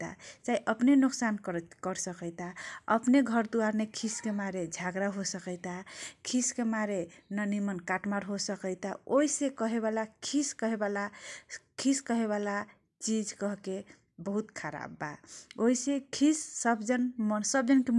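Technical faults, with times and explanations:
No technical faults can be heard anywhere in the signal.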